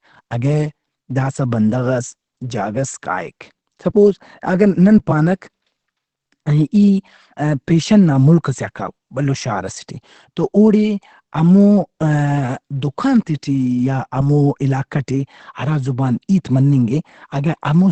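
Throughout the speech, nothing is heard above 8.5 kHz, and the sound is plainly muffled and hoarse. This is Opus compression, likely in its SILK speech mode at a rate that fits 16 kbps. Unlike MP3, it swirls less, giving a narrowed, rough dullness.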